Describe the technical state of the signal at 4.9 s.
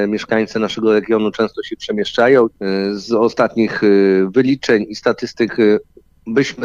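At 4.9 s the signal is intact, with no audible dropout, distortion, noise burst or other fault at that point.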